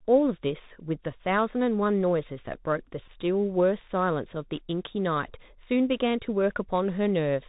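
The whole clip passed through the Bluetooth CVSD headset codec, which encodes each sample as a single up-or-down bit at 64 kbps with an adapting step. The speech is cut off above 4 kHz, s sounds turn scratchy, loud bright sounds distort, and a grainy hiss runs underneath.

A Bluetooth headset packet repeated at 0.66 s: missing audio was filled by decoding the previous packet's bits again, covering 7.5 ms, which fits two lost packets. It comes through as a very brief buzz near 267 Hz. A longer Bluetooth headset packet repeat at 3.06 to 3.08 s covers 11.2 ms, consistent with three lost packets, and the repeats every 3.75 ms give a brief buzz near 267 Hz.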